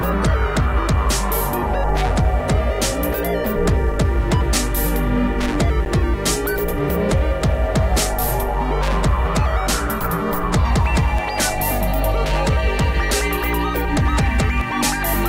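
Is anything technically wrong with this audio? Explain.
Yes. At 5.85 s there is a sharp tick: a block of digital silence about 10 ms long, where the audio drops abruptly to zero and returns without any fade. Samples in that span were replaced by zeros, and the hard edges on both sides make the click.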